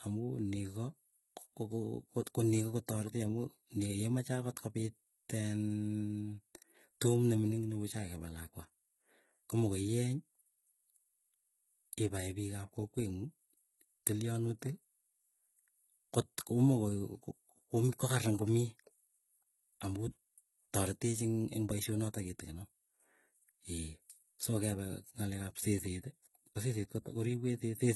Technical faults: HE-AAC compression

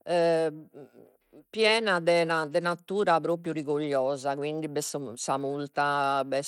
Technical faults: Bluetooth SBC compression

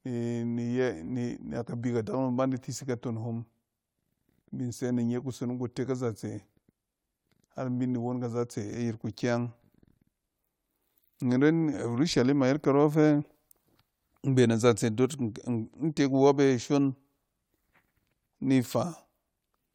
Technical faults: none

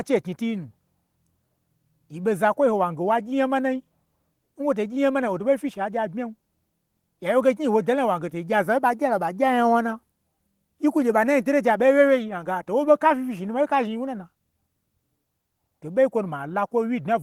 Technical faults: none

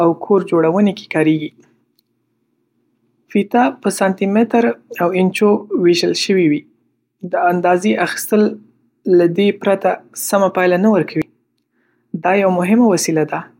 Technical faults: compressed frames skipped

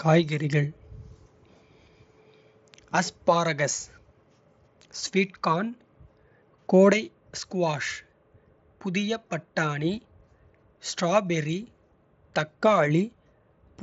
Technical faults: none

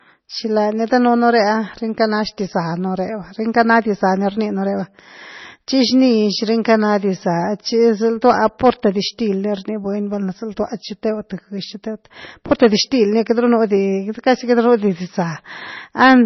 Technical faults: MP3 compression; hard clipping

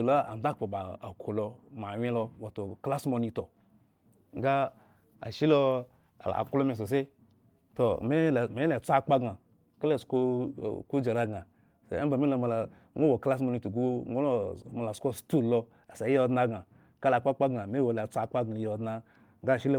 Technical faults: none

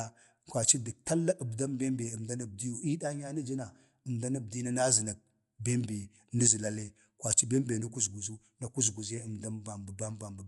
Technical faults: Dolby Digital compression

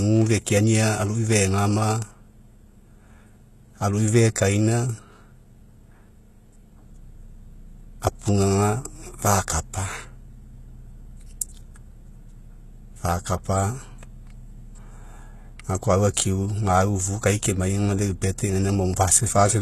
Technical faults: HE-AAC compression

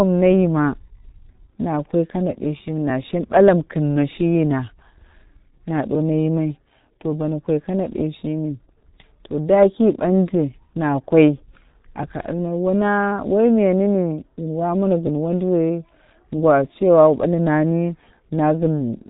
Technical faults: G.723.1 codec

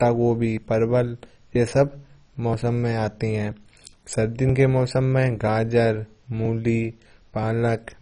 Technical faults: MP2 compression

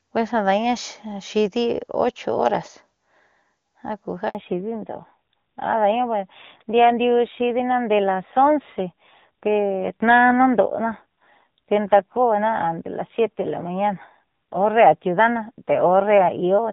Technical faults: handover gap; fallback to narrowband

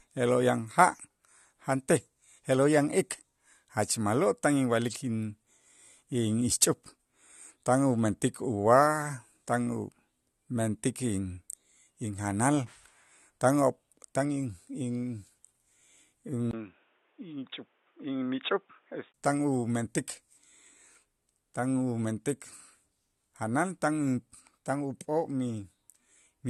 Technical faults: input switched to a poorer device

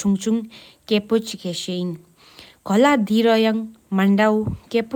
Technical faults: none

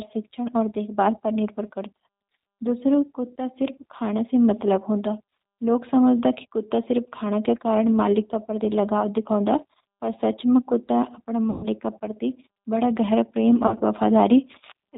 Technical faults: G.729 codec; VoIP packet loss concealed by the speech codec

